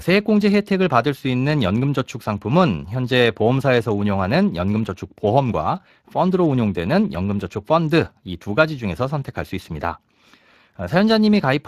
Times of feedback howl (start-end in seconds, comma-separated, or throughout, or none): none